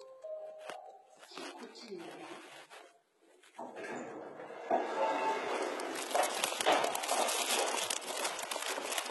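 Sounds, likely passed through heavy HE-AAC compression at a bitrate near 16 kbps: rebuilt treble sounds gritty and metallic throughout, with nothing above 11.8 kHz.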